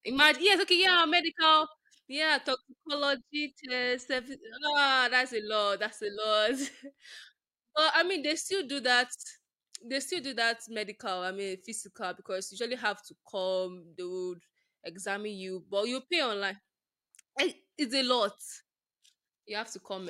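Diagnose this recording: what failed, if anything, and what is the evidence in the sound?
Nothing in this speech recording points to a failure at any stage, so there's no fault to diagnose here.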